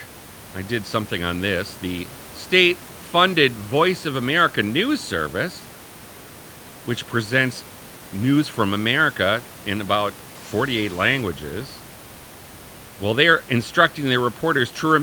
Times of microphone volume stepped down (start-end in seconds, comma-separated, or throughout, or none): none